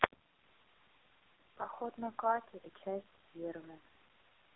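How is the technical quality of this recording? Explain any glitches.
The recording has poor technical quality: the speech was squeezed through the AMR narrowband mobile codec for the whole clip. AMR-NB rebuilds speech from a vocal-tract model excited by a few pulses per frame, and at this heavy level of damage the sound fits one of its lowest modes, around 6 kbps. The result is a buzzy, synthetic voice confined to a telephone band of roughly 250 Hz to 3.6 kHz, with nothing above 3.4 kHz.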